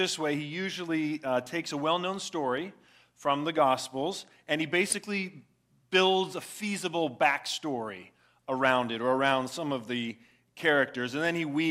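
The audio has a brief burst of DAB burbling from 4.90 to 4.97 s: short noise blips in single sub-bands, consistent with residual bit errors corrupting about three MP2 frames.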